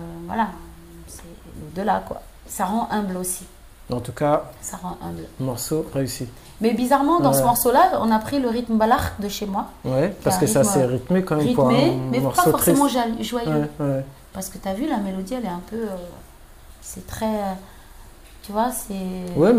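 Nothing in the audio stands out as a technical fault at any point, so there's nothing here to flag.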